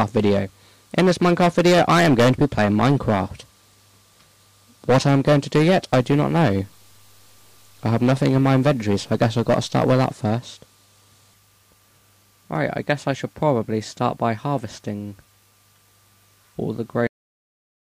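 The audio turns grainy from 5.92 to 10.11 s, with a rough distortion that rises and falls with the sound and roughly 40 dB below it, the likely sign of low bit depth without dither, which fits 8-bit truncation. Unlike dithered noise, which is a steady hiss, this error tracks the signal. At 17.07 s the sound has a cut-off end. It stops mid-sound and drops straight to digital silence for the last 0.76 s, with no decay tail, which sets it apart from a fade-out or a natural ending.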